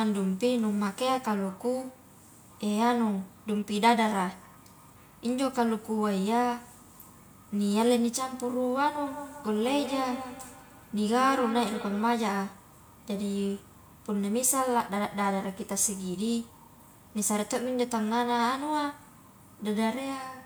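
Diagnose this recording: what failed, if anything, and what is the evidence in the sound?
Feedback echo between two devices, at the call-processing stage, runs from 9.07 s to 12.12 s. Each stretch of speech returns at a fixed spacing of about a fifth of a second, thinner and more ringing with each pass, peaking at about 10 dB below the direct speech. A second device in the same room is playing this call aloud, and the first microphone picks it up again. Its echo canceller only removes its own playback, so the loop keeps recirculating.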